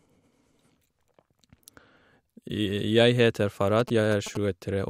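A nearby 2G phone in its signalling state causes GSM signalling bursts from 3.80 s to 4.37 s. The audio circuitry picks up the phone's short radio bursts and rectifies them, turning the pulsed carrier into an audible envelope. Over the speech this comes through as a galloping dit-dit-dit run of short buzzes at the 216.7 Hz burst rate, sitting roughly 15 dB below the speech level.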